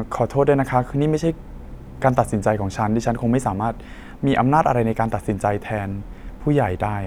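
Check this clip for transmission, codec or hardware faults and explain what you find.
No transmission, codec or hardware faults are audible anywhere in the speech.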